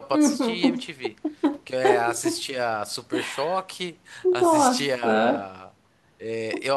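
A speech recording, and nothing is technically wrong with it.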